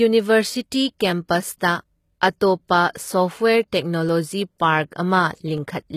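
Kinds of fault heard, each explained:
HE-AAC compression: Running through the whole clip and plainly audible, this likely comes from HE-AAC at around 20 kbps. Only the lower spectrum is really coded, the treble is rebuilt by copying lower bands upward, and nothing reaches past 14.9 kHz.
Clock drift buffer slips: Between 1.10 and 5.58 s there's a click every 1.49 s, about four in all. That steady rhythm likely comes from two clocks disagreeing by around 200 ppm, so a buffer drops or repeats roughly 15 samples each time.
Pre-echo: A short smear of codec noise lands just ahead of sharp attacks at 1.59 s (16 ms), 2.93 to 2.95 s (24 ms), 4.58 s (17 ms) and 4.91 s (11 ms). The noise budgeted for the loud part of a block spills into the quiet moment before it.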